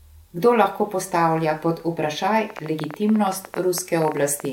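Speech carries a train of clicks from 2.50 s to 4.46 s. The clicks arrive at about 12.3 per second, but the spacing is uneven rather than steady. Around thirty sharp ticks sound in this stretch, all with much the same shape. They peak a few decibels above the speech, so they stand out over it and in the pauses. The likely cause is interference from nearby equipment or a faulty connection or power supply.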